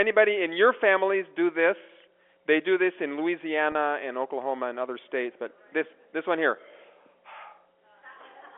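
At 3.72 to 3.75 s the speech briefly hangs on a slightly held, buzzy tone. That's packet loss with pitch repetition. About 30 ms of audio went missing, which fits a single dropped packet, and the receiver covered the hole by looping the last pitch period instead of leaving silence. The gap is short enough that the repeat never fades out, so you get a quick smeared buzz before normal speech resumes over the narrow 300 Hz to 3.4 kHz telephone band of the G.711 line.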